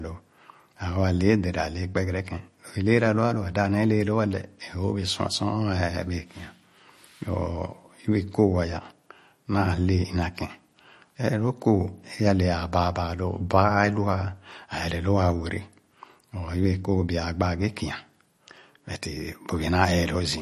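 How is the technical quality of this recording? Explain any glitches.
The recording has plainly audible codec damage throughout. MP3 compression, running the whole clip, is the likely cause: the encoder was short of bits, which fits a low bitrate around 40 kbps, so it removed everything above 13 kHz and dropped weak frequency lines frame by frame. The speech sounds dull, watery and swirly, with metallic sibilants and smeared onsets.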